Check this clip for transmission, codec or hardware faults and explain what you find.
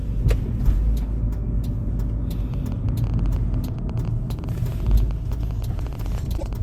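Two faults are present, and the second falls inside the first.

From 2.54 s to 6.54 s there is a train of clicks: around fifty similar pulses at an irregular pace averaging about 11 per second, peaking roughly level with the sound itself. They tick over everything, including quieter moments. The likely cause is electrical interference or a faulty connection or power supply injecting pulses.

From 6.36 s to 6.43 s the audio shows a broken MP3 bit reservoir. It jumps forward, and the next couple of frames (the timing fits 26.1 ms frames) decode wrongly. That happens because those frames borrowed bits from earlier frames that are now missing, likely after frames were cut out, so the decoder reads the wrong data.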